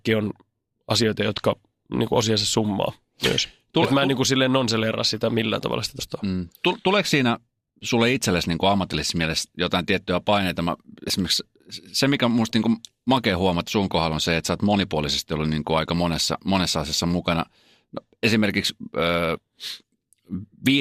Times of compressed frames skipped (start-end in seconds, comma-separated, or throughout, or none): 5.99-6.02, 11.07-11.10, 13.67-13.71, 19.35-19.38